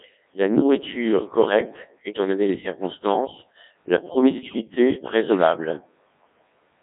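The whole clip runs through the Codec 2 vocoder, heavily damaged. It only sends pitch, voicing, energy and a spectral envelope, then rebuilds speech from sine waves, so everything sounds buzzy and robotic, squeezed into roughly 200 Hz to 3.7 kHz, in its 1.6 kbit/s mode.

Right after "donné les circonstances la", from 4.48 to 4.61 s, there's a burst of bit errors on digital voice radio. Flipped bits, around 5 percent, scramble the frame parameters, so pitch, level and tone jump into a warbly, bleepy garble lasting about three frames.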